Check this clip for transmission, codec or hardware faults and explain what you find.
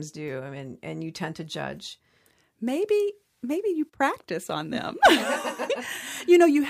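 Nothing stands out as a fault in this speech recording; I listened for anything amiss and came up empty.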